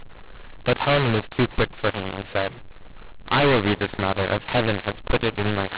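The telephone speech was encoded with mu-law G.711 but decoded as A-law, a mu-law and A-law mix-up that runs through the whole recording. Each 8-bit code is mapped onto the wrong logarithmic curve, so sample levels come back scrambled: some peaks too large, others too small, and near-silent samples pushed well up. The voice sounds harsh and gritty, pauses fill with noise, and everything sits within the narrow band below 4 kHz expected of 8,000-sample telephone audio.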